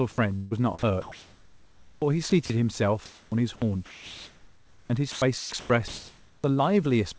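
From 0.36 to 0.53 s, a long network dropout likely cut off the incoming audio for about 160 ms. The receiver stretched the last sound into a fading buzz for about 150 ms. Speech then resumes with that stretch missing, leaving an audible gap in the flow.

At 0.79 to 0.83 s, sound was likely dropped by the voice detector. The sender treated about 40 ms of sound as background and stopped transmitting. Comfort noise replaced that fragment, so the sound simply gives way to steady noise.

The same switch-off continues as comfort noise in place of the background from 0.79 to 2.02 s. The sender likely went into discontinuous transmission, and the receiver generated synthetic noise for about 1.04 s. The room's real ambience, which sits about 42 dB below the speech, gives way to a flat, featureless hiss until speech returns.

From 2.30 to 2.50 s, the sound is chopped by the voice detector. The detector likely toggled transmission on and off, and about 60 ms of sound was swapped for comfort noise.

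The chopping returns at length from 3.06 to 6.44 s. Here the detector likely kept cutting in and out, and about 2.26 s of that span became comfort noise. The sound has repeated holes filled with synthetic noise. Throughout the clip, nothing is heard above 8 kHz, which fits a G.722 call path at 64 kbps.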